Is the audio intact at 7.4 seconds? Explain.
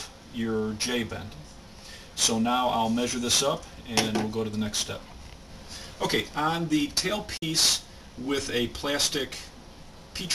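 No. From 7.37 to 7.43 s the sound cuts out for about 46 ms, then returns as if it had kept playing underneath, so that stretch is simply missing. This is likely a Bluetooth dropout: packets failed to reach the headphones in time and were discarded, and a gap this long fits roughly two lost packets. On a waveform it shows as a flat hole with either abrupt edges or a fade of a few milliseconds. On a spectrogram it is a blank vertical strip spanning all frequencies.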